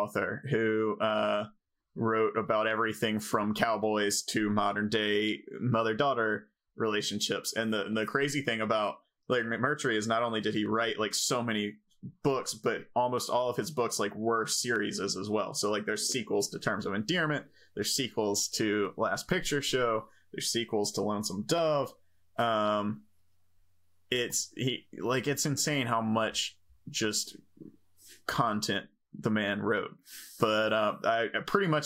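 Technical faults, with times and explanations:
No technical faults are audible.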